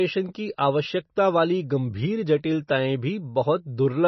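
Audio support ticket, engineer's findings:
Likely MP3 compression, whole clip. Speech band-limited, nothing above 5.9 kHz. Heavy watery swirl, smeared onsets; weak spectral lines dropping in and out. Fits about 24 kbps.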